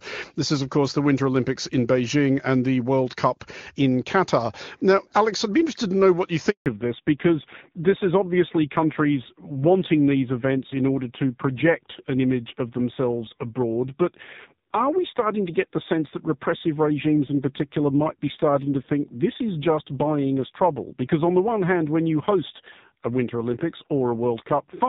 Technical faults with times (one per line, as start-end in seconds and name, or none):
6.50-6.66 handover gap
6.66-24.88 fallback to narrowband